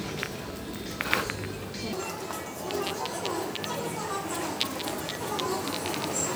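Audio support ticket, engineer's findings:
Section at the wrong speed from 1.93 s to the end: sound suddenly turns hurried and shrill, running 1.74x fast and pitched up roughly ten semitones. Likely a player or edit clocking that stretch at the wrong rate, so speed and pitch shift together.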